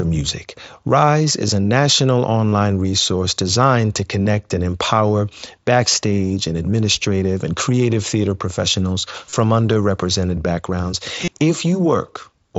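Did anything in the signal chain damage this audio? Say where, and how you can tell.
Yes. The damage is on the Bluetooth link, as concealed Bluetooth headset packet loss. There's a barely noticed blip at 1.48 s just before "a national", then 30 ms patches at 2.50–2.53 s, 4.23–4.26 s (after "resource designed to"), 9.30–9.33 s (after "and creative theater professionals") and 11.25–11.28 s. Each longer gap has a short buzzy held tone and a slight warble as real audio resumes. Those fit runs of about four lost frames, with the first a single 7.5 ms frame. The receiver patched each gap by repeating the best-matching slice of recent waveform.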